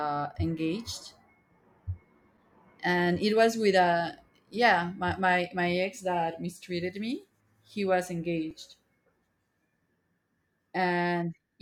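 The output buffer briefly ran empty at 2.38 s, just before "and it was with", and at 8.51 s: an underrun with held sample. The level freezes flat for 5 ms and playback resumes in place.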